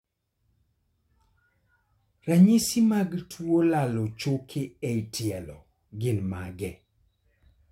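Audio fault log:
No audible faults in speech.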